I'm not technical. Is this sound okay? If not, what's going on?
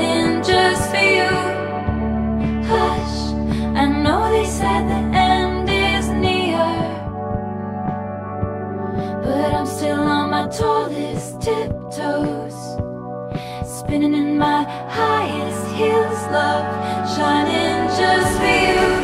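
Yes, it sounds fine, with nothing in it that points to a technical problem you'd need to worry about.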